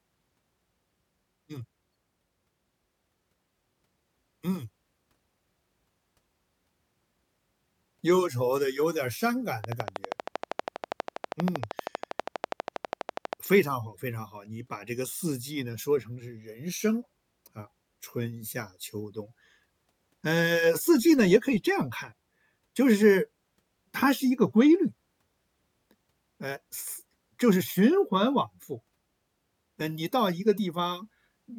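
A train of clicks runs from 9.64 to 13.34 s: around fifty sharp ticks at a regular 12.5 per second, standing well above the speech, likely from electrical interference.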